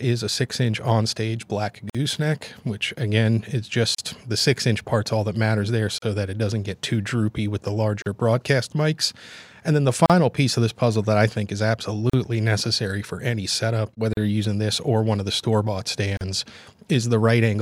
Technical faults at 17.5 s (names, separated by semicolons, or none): none